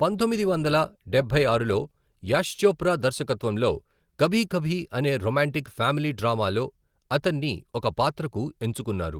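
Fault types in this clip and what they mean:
No faults are present in this clip. The Opus voice compression keeps the full band, with content reaching to about 20 kHz, which points to a moderate bitrate in hybrid mode, and it leaves only light coding traces.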